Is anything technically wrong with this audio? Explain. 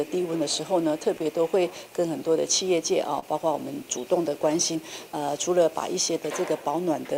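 Yes. The clip has clock drift between sender and receiver, and two faults that follow from it.

The clock drift runs through the whole clip. The sender's audio clock runs about 3% slower than the receiver's. Audio arrives a little too slowly, so the receiver's jitter buffer keeps draining. The receiver has to make up the shortfall somehow. That pressure is present from start to finish, and the next two faults are how it shows up in the sound.

Repeated timing corrections run from 0.16 s to the end. To keep the buffer from running dry, the receiver repeats short pieces of audio. Playback runs at 98% speed, and the repeats add up to roughly 150 ms. All the edits go the same way, toward stretching. They are unevenly spaced and each is small. The result is slight hiccups and a faintly unsteady, dragging tempo.

A short stall from a late packet occurs from 3.19 s to 3.24 s. One packet was not there when it was due, and the buffer ran empty. 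The receiver held the last sound for 28 ms until the packet came. It then carried on from the same point, so nothing is missing. The delay grows by 28 ms. You hear one sound held slightly too long, with a small buzz or dip.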